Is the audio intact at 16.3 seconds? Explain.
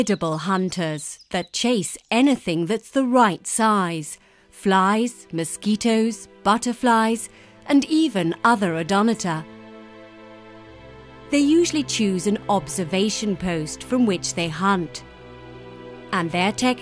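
Yes, at 16.3 seconds the audio plays through intact, with no dropout, click, distortion or other fault at that moment.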